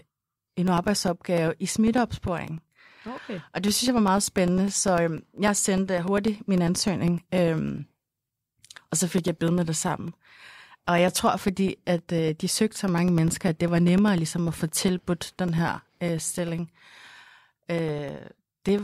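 From 0.07 s to 18.79 s the speech carries periodic USB or driver dropouts: every 0.1 s, ten times a second, something stalls the audio path and roughly 2 ms of signal is lost and replaced with silence. Across around two hundred such gaps, each cut in the waveform produces a tick, so the speech takes on a steady, even clicking that is heard only while sound is present and disappears in the pauses.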